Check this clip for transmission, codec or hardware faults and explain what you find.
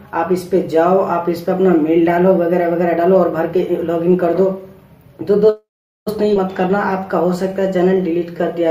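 Three transmission faults are audible, all in the second half of the clip.

From 5.49 to 6.08 s there is a call audio freeze. The likely cause is packets held up in transit, so the jitter buffer ran dry and the receiver had nothing new to play. It stretched the last sound into a brief fading buzz or hiss, then about 0.42 s of silence. When the packets arrived, playback resumed where it had stopped. About 0.57 s of delay was inserted and nothing was lost.

At 6.34 to 6.38 s the audio skips ahead. A stretch of audio, roughly a third of a second, was dropped while later audio was already waiting, either in transit or by the jitter buffer when it overflowed. Only about 10 ms bridges the gap. The sound on either side of the missing piece is joined almost directly, so it seems to jump abruptly forward mid-flow.

From 6.62 s to the end at 8.71 s the jitter buffer slows playback down. Its reserve was low or its target delay had just been raised, so the receiver built up a reserve by repeating single pitch periods and slivers of pauses many times over, adding 188 ms in total. 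Playback runs at about 91% speed with the pitch unchanged. Sounds come out slightly drawn out and sluggish.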